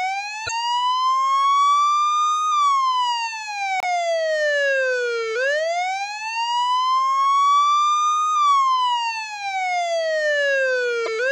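Corrupt frames were decoded at 0.45 to 0.50 s, 3.80 to 3.84 s and 11.04 to 11.08 s. Each spans a couple of damaged frames. Flipped bits sent energy to wrong frequencies. Each is heard as a brief chirp, squeak, blip or burst of noise. The last is loudest.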